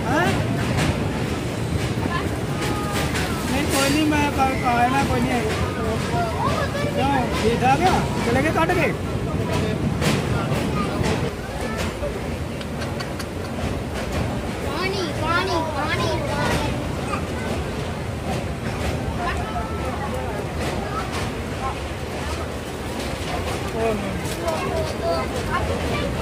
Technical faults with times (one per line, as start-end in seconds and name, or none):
none